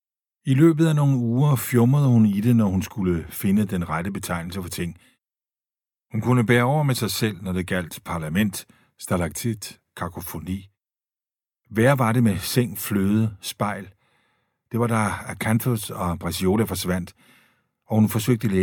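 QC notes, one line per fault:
Nothing stood out on listening to the speech in this clip.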